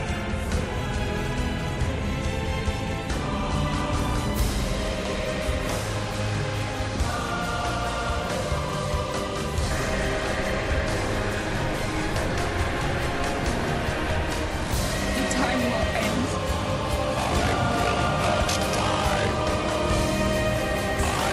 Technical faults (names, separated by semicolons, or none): none